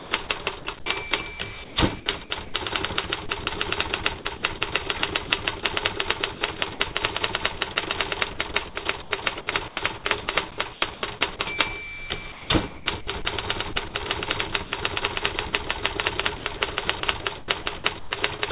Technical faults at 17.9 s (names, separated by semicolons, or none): sound chopped by the voice detector